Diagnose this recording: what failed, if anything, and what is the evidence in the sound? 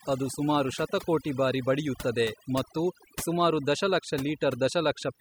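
Overdone noise removal in the processing stage, across the whole speech clip. Gaps fall to near silence speckled with twinkling artefacts: an aggressive reduction stage is gating individual frequency bands near its noise estimate, taking quiet speech components along.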